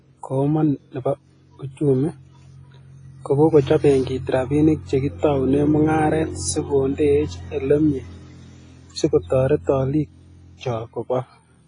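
WMA compression throughout: coarse quantisation smears noise into ringing, breathing hiss, and nothing survives above 10.1 kHz, likely from a bitrate near 24 kbps.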